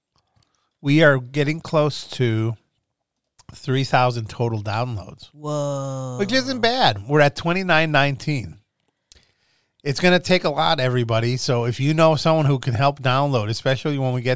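No technical faults can be heard anywhere in the recording.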